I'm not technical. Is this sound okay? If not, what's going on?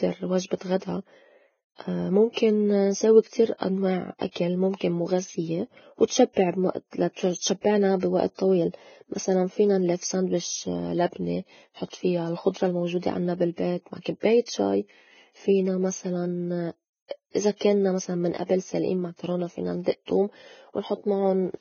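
No. The speech was likely squeezed hard by Vorbis compression, which throws away fine detail to save space. Throughout, nothing above about 6.6 kHz survives, so the voice sounds dull yet hissy and grainy, with smeared consonants.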